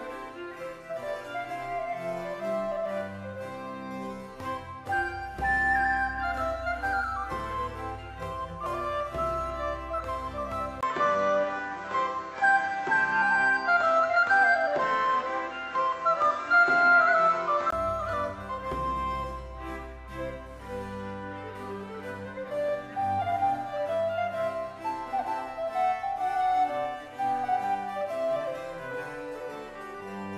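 From 10.81 to 17.72 s, after a 20 ms gap, everything above 8 kHz is gone, the level shifts around 5 dB and a new noise floor appears around 30 dB down: likely an input switched to a poorer device. A filter alone wouldn't add noise or a gap.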